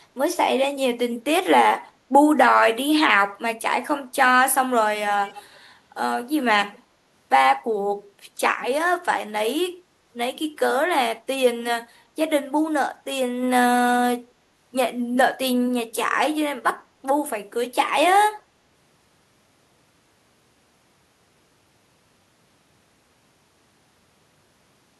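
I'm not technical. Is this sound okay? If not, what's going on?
No. Around 5.25 to 5.59 seconds there is an echo leak. The likely cause is a call where one side used a loudspeaker, and the built-in echo canceller failed to remove all of the sound its microphone picked back up, so some got sent back down the line. You hear it as a faint, delayed copy of the speech trailing about 0.3 seconds behind the original, a brief ghostly repeat lasting about a third of a second.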